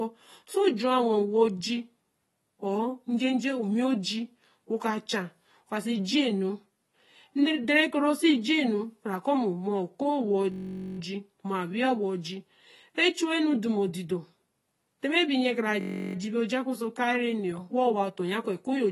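Speech that sounds dull and smeared with a fizzy edge and nothing above 12 kHz, likely AAC compression at a low bitrate. There are two system hang loops, at 10.52–10.99 s and 15.81–16.15 s (just before "ji bī ojakpo ōso"). Each one buzzes at 46.9 Hz because it repeats a 21.33 ms chunk, which fits a 1024-sample buffer.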